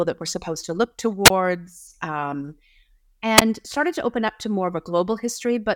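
Wireless microphone squelch dropouts occur at 1.25 to 1.30 s, right after "we're supposed to look", and at 3.37 to 3.42 s, just before "started to open up". Each time the radio link fades, hiss briefly rises, and the receiver's squelch mutes the speech for about 22 ms and 11 ms respectively.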